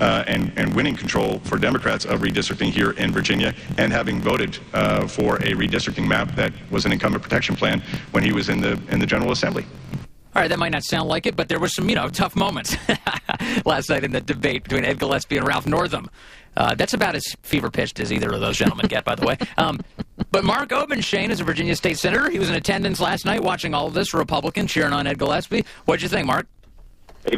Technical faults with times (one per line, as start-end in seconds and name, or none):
0.00-27.37 block size mismatch (truncated)